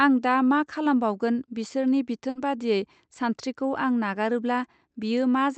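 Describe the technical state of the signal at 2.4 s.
Just before 2.4 s, from 2.29 to 2.37 s, a burst of packet loss was concealed by stretching the last sound for 60 ms. It is heard as that sound briefly held and fading, then a jump ahead. On a spectrogram it shows as smeared, repeating content that decays; the waveform shows a shrinking repeated stretch, all below the 8 kHz Opus band edge.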